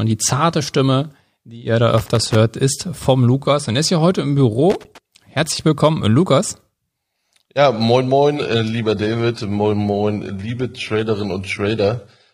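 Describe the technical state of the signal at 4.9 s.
At 4.9 s the signal is in the middle of a loose connector crackle that runs from 4.70 to 4.98 s, right after "ist hier heute im". A worn or dirty contact keeps making and breaking, chopping the speech into fragments. It sounds like an irregular scratchy burst. On the waveform the envelope breaks into gaps and sharp spikes; a spectrogram shows scattered vertical broadband streaks across the stretch.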